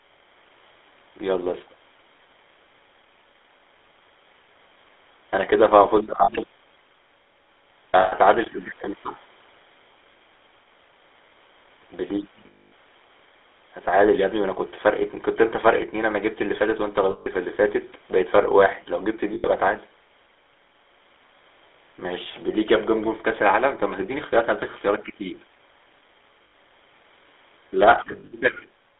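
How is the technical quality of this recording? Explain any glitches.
The speech is rough, band-limited phone audio with seven brief dropouts.

GSM full-rate codec, throughout: pulse-driven vocal-tract modelling, consistent with a 13 kbps codec, leaves a buzzy, gravelly voice. A spectrogram shows energy confined to 300 Hz to 3.6 kHz.

Lost GSM frames at 6.24, 8.0, 12.46, 17.1, 19.34, 26.44 and 28.12 s: each gap is filled by repeating the last good frame, giving a metallic ring. They last 40, 120, 260, 160, 100 and 100 ms, and the last is 140 ms of short losses over 200 ms. Waveforms show smeared patches, and spectrograms show frozen horizontal streaks.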